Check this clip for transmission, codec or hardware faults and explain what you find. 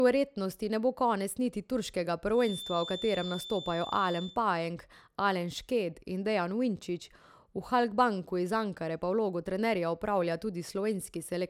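A feedback whistle sits in this speech clip from 2.3 to 4.40 s. It is a thin, steady tone at 3.5 kHz, roughly 15 dB below the speech, swelling and fading slowly in level. The likely cause is a loudspeaker-to-microphone loop poised at the edge of feedback, sustaining one frequency without running away.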